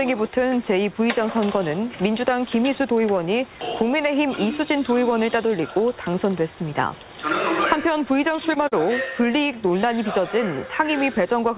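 A short stall from a late packet comes first, at 8.36 to 8.40 s. A packet arrived late, the jitter buffer ran dry, and the receiver held the last sound for about 16 ms before carrying on from the same point. Nothing is lost, but the sound hangs briefly with a faint buzz or dip.

A short concealed packet loss follows at 8.54 to 8.58 s. About 20 ms of audio never arrived, so the decoder extended the preceding sound for roughly 13 ms and blended back in, leaving a small smear or wobble where that fragment is gone.

A second late-packet stall lands at 8.68 to 8.74 s, a longer hold of about 41 ms that pushes everything after it later by the same amount. Throughout, the call path's band limit shows, with nothing above 4 kHz, which fits G.711 mu-law coding.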